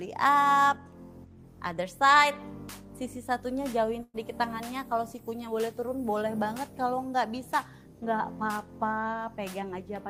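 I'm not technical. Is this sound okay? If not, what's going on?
No. At about 4.03 to 4.16 s the sound briefly smears: the last bit gets stretched out and fades, there's a tiny moment of silence, then the audio picks up again slightly further along. That is a burst of packet loss. A short run of the data carrying the audio never arrived in time, so the player filled the hole by holding the last sound and letting it die away. About a tenth of a second of the original is simply missing.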